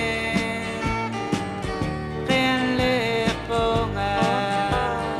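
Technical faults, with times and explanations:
Nothing stood out on listening to the clip.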